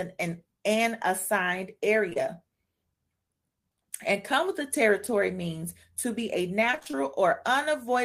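Around 2.09 to 2.18 s there are two back-to-back bits of short concealed packet loss, each about 20 ms of audio that arrived too late. The decoder bridged each hole by stretching the preceding sound and then blending back, so you get a quick smear or brief wobble rather than a clean break.

Later, from 6.72 to 6.95 s, it's repeated packet loss with that robotic sound: a rapid string of small holes, the longest about 27 ms, with roughly half the stretch patched. Each hole is filled by extending the last sound, and the next hole hits before things recover, so it turns choppy with bits dropping out.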